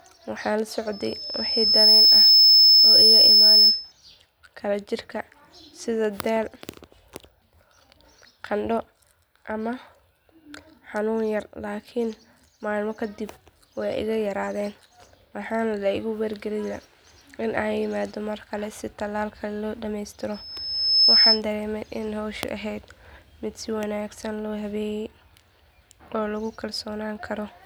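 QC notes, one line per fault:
0.92–3.92 s and 20.34–21.42 s, loudspeaker feedback squeal: a piercing 5.2 kHz tone starts after "waxaan la" and again before "dareemay in howshu ahayd". It swells over about a second, then under a second, to roughly 15 dB above the speech. The microphone is picking up its own loudspeaker, and the loop gain tops unity at that frequency.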